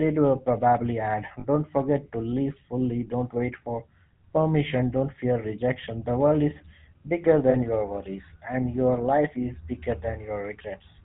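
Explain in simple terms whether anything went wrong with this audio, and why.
Two things went wrong. The whole recording passed through the GSM full-rate codec, an old mobile-phone coding method that rebuilds the voice from a simplified model driven by regular pulses. That gives the speech a buzzy, gravelly roughness and cuts everything above 4 kHz. Ordinary muffling only dulls the sound, but this also adds grit.

There are also lost GSM frames at 1.4 s and 7.5 s, each gap about 40 ms long. The decoder filled each gap by repeating the last good piece. That is why you hear a brief metallic ring there instead of a clean silent dropout.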